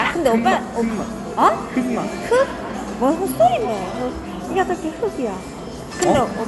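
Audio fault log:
throughout: generation loss. The sound is swirly and hollow, with smeared transients and blurred attacks, and nothing is present above about 11.9 kHz. The band limit and artefact texture fit MP2 at around 96 kbit/s, but the damage is heavier than one pass at that rate would give. This is likely from repeated decode and re-encode, roughly seven passes, each requantising on a shifted frame grid so that noise and spectral gaps accumulate.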